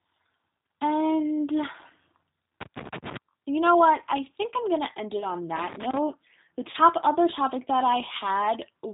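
Throughout the speech, the G.729 codec damage is plainly audible. Everything above 4 kHz is gone, and the voice has a rough, slightly synthetic edge, which fits an 8 kbit/s G.729A stream. The decoder rebuilds each frame from a vocal tract filter, a pitch predictor and a few pulses rather than from the original waveform. On a spectrogram the energy stops sharply at 4 kHz, and the harmonics look grainy and smeared.

From 2.61 to 3.17 s, just before "you know what I", there is loose connector crackle. A worn contact is making and breaking, so the signal is chopped. It sounds like irregular scratching. The waveform shows sharp spikes and dropouts at uneven spacing. On a spectrogram these appear as thin vertical broadband streaks reaching the 4 kHz ceiling.

VoIP packet loss concealed by the speech codec occurs from 5.21 to 5.25 s, after "going to end it". The length points to a single lost 10 ms frame. 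The decoder carried its last pitch and filter forward at falling gain, so the sound turns briefly buzzy and dull. The second loss event follows the next crackle.

Loose connector crackle returns from 5.56 to 5.98 s, after "to end it on", with the same spiky, broken waveform and scattered vertical streaks.

The second concealed packet loss runs from 6.71 to 6.76 s and fits about three lost frames, 30 ms in total. Here the extrapolated tone is longer and fades more noticeably. On a spectrogram, smooth repeated harmonic bands replace the normal formant movement, and the waveform shows a decaying periodic stretch before the voice recovers.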